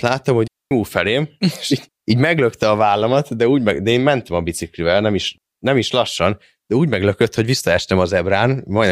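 Clean holes of near silence open at 0.48 s, lasting about 237 ms, and at 5.38 s, lasting about 212 ms, with no burst of noise either side. These are digital wireless dropouts: the receiver lost too much data and muted with a very short fade.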